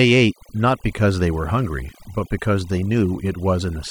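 Overdone noise removal runs throughout the speech: aggressive band-by-band suppression leaves near-silent gaps with twinkling specks, unlike broadband gating, while softer voice detail thins.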